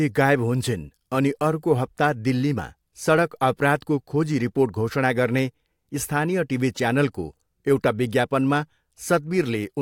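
No technical faults can be heard anywhere in this recording.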